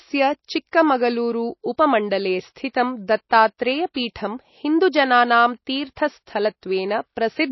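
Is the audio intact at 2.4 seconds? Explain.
No. At 2.4 seconds, as everywhere in this speech clip, the sound is dull and watery, with plainly audible swirling and smeared consonant attacks, and nothing is present above 5.8 kHz. This is likely MP3 compression at a very low bitrate, on the order of 24 kbps. Starved of bits, the encoder cuts the treble at a fixed frequency and drops weak frequency lines, which flicker on and off between frames and leave that swirly texture.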